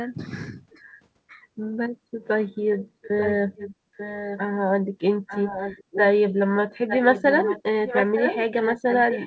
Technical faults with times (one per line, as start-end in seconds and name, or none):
0.87-0.93 echo leak
2.73-4.39 echo leak
5.27-6.34 echo leak
6.88-9.27 echo leak